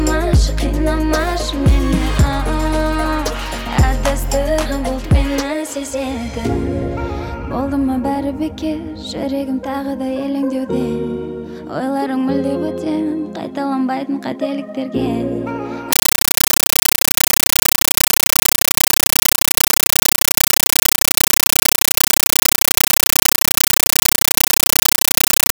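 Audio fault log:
15.93–25.52 s, compressed stream played as audio: The sound gives way to very loud, chattering static. The data is taken as ordinary samples instead of being decoded. Each frame is a 9.33 ms noise burst, then silent padding, 31.25 times a second. This points to an AC-3 stream, likely at 448 kbps.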